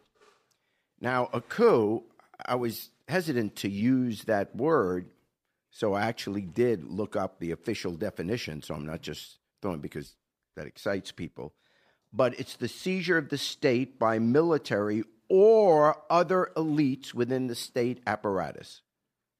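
No technical faults are audible anywhere in the recording.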